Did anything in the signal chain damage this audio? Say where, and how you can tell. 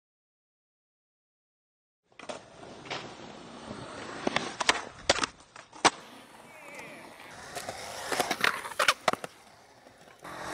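Yes. The adaptive stream started at a low bitrate, a network and playback fault: from 0 to 6.0 s the treble is missing and codec artefacts are stronger, then quality jumps with no gap, which fits AAC stepping from 32 to 96 kbit/s. It happens at startup and only improves, so it is not a congestion downswitch or a dropout.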